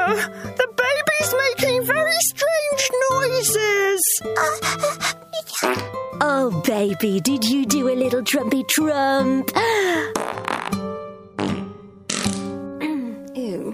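No technical faults can be heard anywhere in the clip. Nothing in the audio calls for comment.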